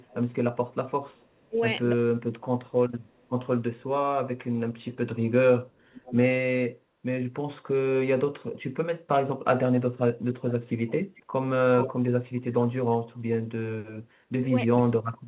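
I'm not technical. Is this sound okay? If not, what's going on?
No. There are two problems, both pointing to trouble with a speakerphone on the call.

Echo leak: at 0.02–1.47 s, 3.01–3.83 s, 5.76–6.16 s and 10.5–12.26 s, a second copy of the speech follows about half a second behind. It's faint at first and nearly as loud as the real speech at 10.5–12.26 s. Room reverb would blur the speech, but this is a separate, late repeat. The likely cause is an echo canceller missing the sound coming back from a loudspeaker.

Speech suppressed in double talk: at 1.49–1.57 s and 14.35–14.51 s, the speech briefly drops sharply in volume while the other side is also making sound. A network dropout would cut out at random, but these dips happen only when both sides overlap. The likely cause is the echo canceller turning everything down because it can't tell the two apart.

The slightly muffled, phone-like tone is just the call line carrying nothing above 4 kHz, and it isn't a fault.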